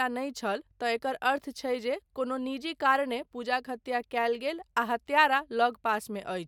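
No dropouts, clicks, distortion or other technical faults are audible anywhere in the recording.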